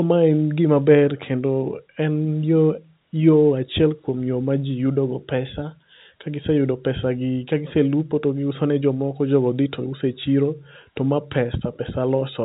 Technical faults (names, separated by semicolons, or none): none